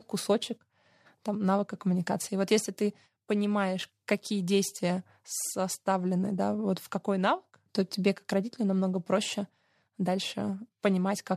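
No dropouts, clicks, distortion or timing errors turn up anywhere in the recording; the signal path holds steady throughout.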